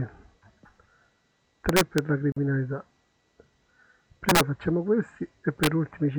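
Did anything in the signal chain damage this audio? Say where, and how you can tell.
Yes. Integer overflow in the gain or sample-format stage cracks the audio at 1.69–1.98, 4.29–4.41 and 5.64–5.67 s. Peaks about 2, 5 and 2 dB over full scale wrap to the opposite sign, appearing as sheer full-range jumps on the waveform.

A gap at a join of encoded pieces, from the codec stage, opens at 2.32 s: 44 ms of untrimmed silence, a blank vertical strip on the spectrogram, after which the sound resumes where it stopped.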